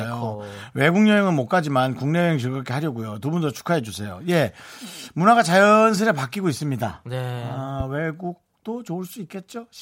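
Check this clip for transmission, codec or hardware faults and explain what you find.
One fault stands out in this speech clip: a loud pop from 7.80 to 7.83 s. A single brief pulse of voltage has been added to the signal, likely from a plug, switch, static discharge or driver glitch. The circuits downstream shape that step into a short, sharp transient peaking a few decibels above the speech. It is heard as one abrupt pop lasting about 26 ms, sitting on top of the speech, which carries on underneath it.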